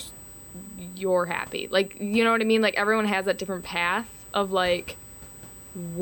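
Throughout, USB whine: current drawn by the bus in 125-microsecond microframes leaks into the audio, adding a fixed 8 kHz whine, strongest at 16 kHz, roughly 20 dB under the speech.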